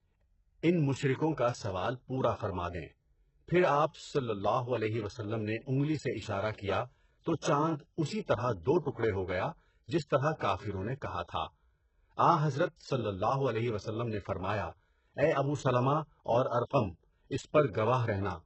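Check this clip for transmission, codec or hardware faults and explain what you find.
One fault runs through the whole speech clip, and it sounds like heavy HE-AAC compression.

Throughout, the upper band is synthetic. Sibilants come out gritty and lispy, and nothing reaches above 8 kHz. The likely cause is spectral band replication rebuilding treble from copied lower bands at a very low rate, which fits about 8 kbps. A plain low-pass would instead sound dull and clean.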